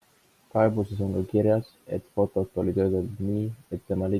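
Speech recording with no technical faults heard anywhere in the signal.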